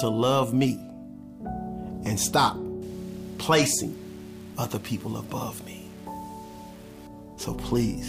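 Low bit depth without dither, 2.82 to 7.07 s: grainy distortion following the sound, about 25 dB below it, likely undithered rounding consistent with 7 bits.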